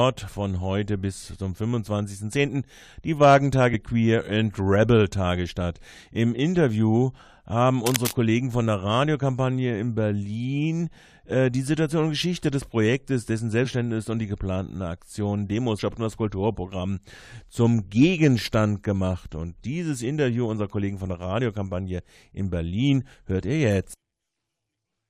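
The sound jumps forward three times where compressed frames were skipped: at 3.73 s by roughly 70 ms (about three frames), at 13.64 to 13.66 s by roughly 100 ms (about five frames), and at 15.78 s by roughly 300 ms (about ten frames). The frames are 23.2 ms long. Each join shows on the waveform as a sudden discontinuity in the envelope. From 7.86 to 8.11 s a dense, uneven scratching rustle sits about 5 dB below the signal. It is cable scratch noise, likely from a worn cable or connector being moved, and it appears as ragged broadband speckle on the spectrogram and jagged bursts on the waveform.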